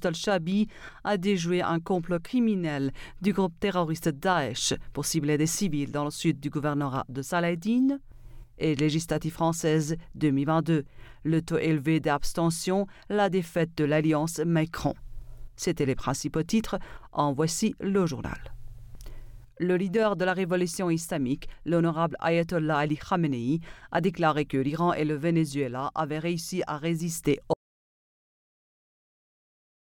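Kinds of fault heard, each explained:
Audio dropout to silence: at 27.54 s the sound cuts off mid-flow and the remaining 2.3 s to the end are silent, with no room tone underneath. The likely cause is lost input, such as a disconnected device or failed link, while recording continued writing silence.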